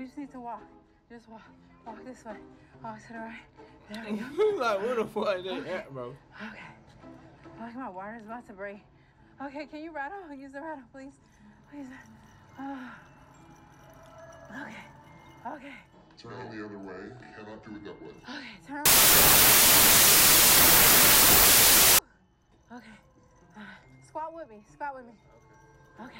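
From 18.86 to 21.99 s, loud noise buries the sound, which plays at two-thirds speed and lower pitch: a wrong sample width, with packed 24-bit samples read as 16-bit.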